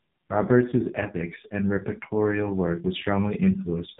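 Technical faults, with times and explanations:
Throughout: AMR narrowband mobile codec, heavy damage; buzzy, synthetic speech fits a bitrate near 5.15 kbps; the spectrogram shows a flat ceiling, nothing above 3.8 kHz.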